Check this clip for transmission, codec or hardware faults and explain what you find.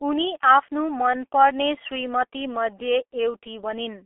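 One codec fault runs through the whole speech clip: G.723.1 coding, heavy throughout. Thirty-millisecond frames with a slowly updated voice model, consistent with roughly 6.3 kbit/s, inside a 300 Hz to 3.4 kHz line band, leave the speech muffled and hoarse with smeared consonants.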